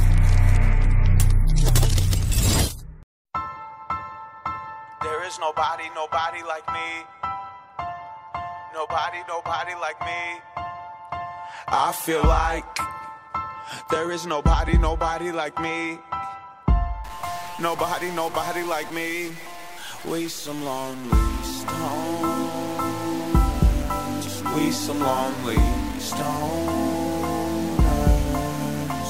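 From 17.04 s to the end, the audio shows a stuck bit, likely a single data line or converter bit held fixed at 0 or 1. Roughly half the samples are pushed off by that bit's weight, a step of around -35 dBFS, in a pattern that follows the waveform. The result is a harsh, buzzy distortion riding on the sound. Because the error flips with the sign of small values, quiet passages fill with noise instead of falling silent.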